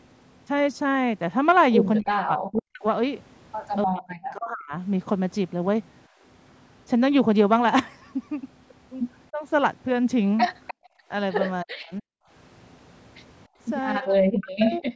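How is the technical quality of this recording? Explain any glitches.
The recording has repeated echo-canceller problems in a call. The audio tops out around 8 kHz, as call processing would produce.

Speech suppressed in double talk: the talker's level drops by up to about 40 dB at 2.0 to 4.74 s, 9.31 to 9.43 s, 11.64 to 12.09 s and 13.99 to 14.93 s. The cause is likely the canceller turning everything down while both sides spoke. The voice dips.

Background gated by the echo canceller: the room sound drops at 6.08 to 6.22 s by about 15 dB, at 10.74 to 11.09 s by about 40 dB, and at 13.48 to 13.59 s by about 28 dB. The canceller clamped the microphone while the loudspeaker played. The room sound returns once it releases.

Echo leak: at 10.67 to 10.74 s a faint scrap of voice returns about 302 ms late, around 15 dB below the speech. The likely cause is the loudspeaker side's canceller failing to remove its loudspeaker pickup and sending it back.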